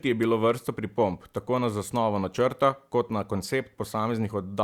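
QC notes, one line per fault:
No fault found, so there are no QC notes to give.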